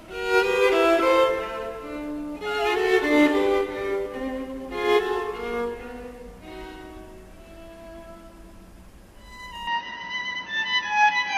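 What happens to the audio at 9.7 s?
At 9.67 s the sound abruptly turns duller and boxier and stays that way to the end of the clip at 11.37 s. Nothing is audible above 6.4 kHz, the level shifts by around 5 dB, and a new, faint noise floor appears well below the signal. There is no gap at the transition. This pattern points to an input switched to a poorer device, likely a second microphone or a headset call profile with its own narrower band, tone, gain and noise.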